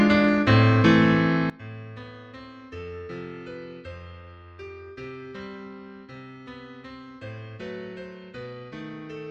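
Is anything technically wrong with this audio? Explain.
Yes. From 1.50 s to the end at 9.30 s, the clip behaves as though one channel inverted, most likely a stereo channel with its polarity reversed and then summed to mono. Everything common to left and right cancels in that sum, and the level drops by about 21 dB. Centred material nearly disappears, leaving only a faint residue made of whatever differs between the two channels.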